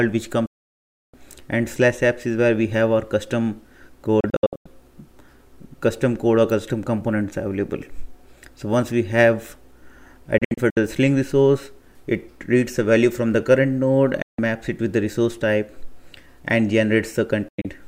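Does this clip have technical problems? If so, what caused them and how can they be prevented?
Yes: a digital broadcast dropout, five times. The receiver lost the signal or rejected corrupted frames and muted until clean frames returned, so the sound cuts out almost instantly and what was transmitted in between is gone. There is a solid gap at 0.46 to 1.14 s and a short one at 14.22 to 14.39 s. The gaps at 4.20 to 4.66 s, 10.38 to 10.77 s and 17.48 to 17.68 s break into several brief holes, which fits lost frames of about 32 ms each. Improving reception or antenna placement, or adding stronger error protection, would prevent it.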